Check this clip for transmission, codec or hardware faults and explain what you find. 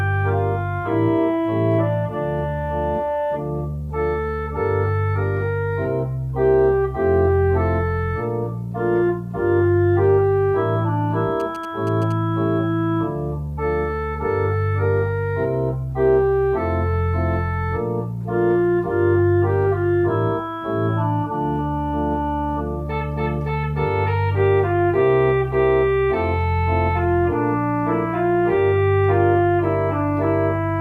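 One hardware-related fault is present. GSM signalling bursts from 11.40 to 12.12 s: a nearby 2G phone exchanging short control transmissions radiates groups of RF bursts that the audio circuitry rectifies. The result is a galloping dit-dit-dit of brief buzzes at about 217 Hz, sitting roughly 20 dB below the sound.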